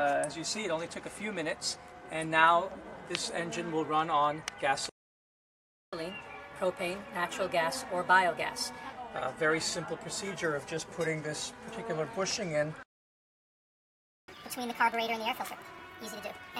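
At 4.89 s the sound cuts out into silence until 5.93 s, a gap of about 1.03 s. This is a playback stall, likely the player running short of data. From 5.93 to 8.93 s comes catch-up at higher speed. The backlog plays 1.15 times fast, so pitch rises about two semitones, then settles. A second stall silences the audio from 12.83 to 14.28 s, about 1.45 s. Catch-up follows from 14.28 s to the end, now at 1.5 times speed. The pitch jumps roughly seven semitones, sounding hurried and chipmunk-like.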